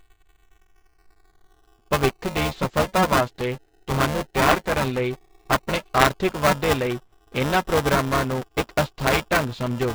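Right from the start and all the way through, the speech sounds roughened: what's left up top has that breathy, grainy, noise-filled quality. That points to heavy Bluetooth LC3 compression, likely at a low rate, something like 24 kbps with 7.5 ms frames. At that budget the encoder throws away most of the upper spectrum and papers over the gaps with synthetic noise.

Also running the whole length is buffer tearing, a rattly, robotic buzz at 375 Hz that rides along with the speech and drops out in the pauses. That rate fits a 128-sample buffer at 48 kHz. The writer and the reader of the ring buffer have drifted so they cross mid-period, and about a fifth of each buffer ends up holding audio roughly 7 ms stale. That leaves a hard splice on either side of it every cycle.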